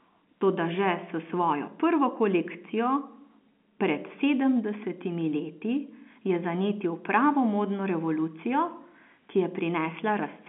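No faults found in this speech; the narrow telephone band, roughly 200 Hz to 3.4 kHz, is just the normal G.711 telephone coding path.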